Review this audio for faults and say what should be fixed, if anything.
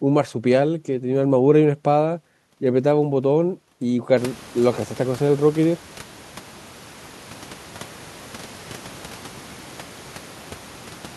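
Nothing in this speech recording needs fixing. The room noise picks up by about 23 dB around four seconds in and then stays about 24 dB below the speech, which is part of the recording space rather than the system.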